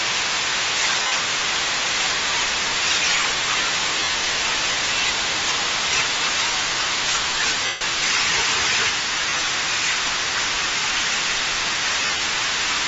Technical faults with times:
0.00-12.87 Bluetooth LC3 compression
1.02-1.12 lost LE Audio frames
4.00-4.14 lost LE Audio frames
7.66-7.81 lost LE Audio frames
9.19-9.47 lost LE Audio frames
12.00-12.20 lost LE Audio frames

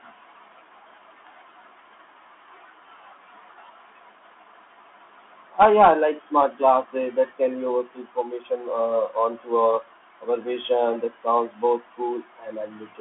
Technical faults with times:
0.00-13.00 Bluetooth CVSD headset codec

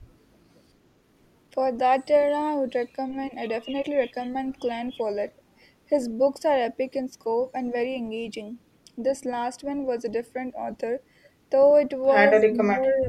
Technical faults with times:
12.37-13.09 speech suppressed in double talk

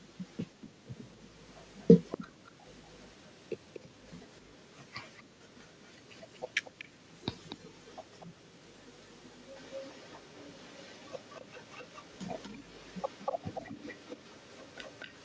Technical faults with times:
0.00-15.24 echo leak

